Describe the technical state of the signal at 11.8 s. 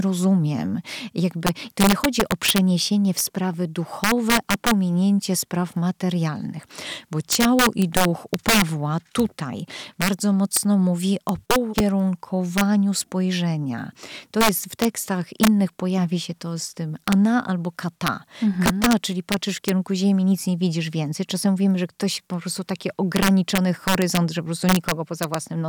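At 11.8 s, right after "bardzo mocno mówi o", there is a click or brief buzz: a tiny stretch of sound plays twice with hard joins at each end. This is a repeated buffer. New audio arrived late, so the device replayed its last block, about 1.33 ms long, which fits a 64-sample buffer. That block played one extra time and roughly a millisecond and a half of audio went missing. At this size the repeat is far too short to hear as a stutter and comes through as a click or brief buzz.

The moment also carries the integer overflow present throughout the clip: violent, harsh cracks on the loudest peaks, much sharper than ordinary clipping. The gain drives the signal about 7 dB past the integer limit, and every sample that crosses it wraps around to the opposite extreme instead of being held at full scale. Only around half a percent of samples go over, so the cracks land only on the strongest peaks of the speech.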